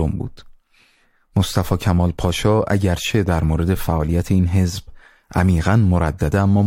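Nothing stood out on listening to this speech recording.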